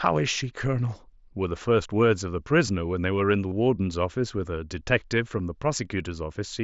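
At 3.49 to 3.52 s, a short run of voice packets between the headset and the phone went missing, about 30 ms of audio, which fits a handful of consecutive lost packets. This is concealed Bluetooth headset packet loss. The receiver filled the gap by repeating the closest-matching recent stretch of waveform, so the speech briefly turns into a buzzy, steady tone at full level, then warbles slightly as real audio resumes through the mSBC headset codec.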